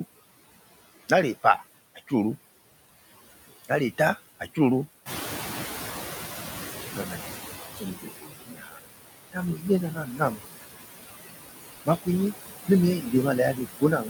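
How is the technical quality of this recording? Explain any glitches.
The recording has audible processing faults from a noise suppressor throughout, plus several dips where speech itself was swallowed.

Noise suppressor artifacts run throughout: steady noise is cut by about 17 dB, so the noise sinks between words and rises under them.

Speech cut by the noise suppressor occurs at 1.95–2.12, 3.65–4.58, 6.95–7.32, 7.76–8.8, 9.32–10.41, 11.85–12.34 and 12.68–14.09 s. Quiet speech parts mistaken for noise drop by about 10 to 20 dB and sound faint. These show as dips in the waveform and spectrogram.

The noise suppressor catching up follows the room noise jumping about 12 dB near 5.0 s. Its estimate lags for 2.72 s, until 7.77 s, so noise first passes with less reduction, then fades as the background band darkens.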